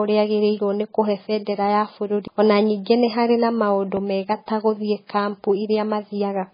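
MP3 compression runs through the whole of this speech clip. Nothing is heard above 5 kHz, and the damage is heavy: the sound is watery and swirling, and onsets smear. This is likely MP3 coding at a very low bitrate, around 16 kbps. With so few bits, the encoder drops weaker frequency lines, which flicker in and out from frame to frame. It also cuts off the treble at a fixed point, which removes the upper band entirely.

A CD skip comes at 2.27 s, right after "agĩrĩirwo nĩkũhe bendera ya". The sound mutes for only a few milliseconds, then resumes at "ona ningĩ nĩharĩ maũndũ" from a different point, as if the laser had jumped to another turn of the disc's spiral. It is heard as a tiny tick or gap followed by an abrupt jump in the flow, rather than a smooth continuation.

A loud pop sits at 3.97 to 3.99 s, between "ona ningĩ nĩharĩ maũndũ" and "mega ta". It is a single sharp pop about 5 dB above the surrounding signal. 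The speech carries on underneath it without interruption. The likely cause is a sudden voltage step or pulse entering the signal path, such as from a plug, switch, static discharge or driver glitch. The circuitry after that point then shapes the pulse into this short burst.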